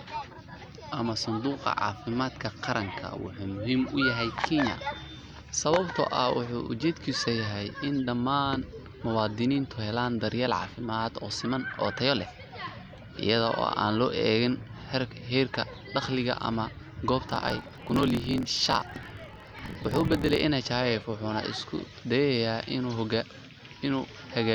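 From 17.27 s to 20.45 s the speech shows a block size mismatch (truncated). The end of each block is dropped, causing a 43.1 Hz buzz (fitting a 1024-sample read) and a 1.12× speed-up. Unlike a sample-rate error, the timbre stays.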